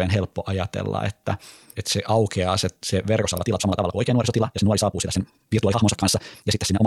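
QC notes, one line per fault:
3.19–6.86 s, time-stretched section: From just after "se aukeaa se se" to the end, the audio was likely squeezed by time-stretching software to fit a shorter length, running at about 1.97 times normal pace while holding pitch by dropping short slices. The speech suddenly rushes ahead at nearly double speed with no rise in pitch, with syllables crowding into one another.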